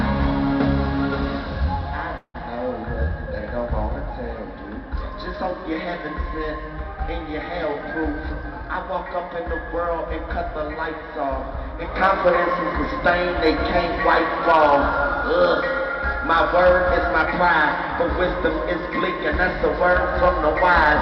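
From 2.17 to 2.36 s there is a call audio freeze, likely from packets stalling in transit until the jitter buffer ran dry. The last sound is stretched into a fading buzz that drops to about 60 ms of silence. Nothing is lost, but everything after resumes 168 ms late.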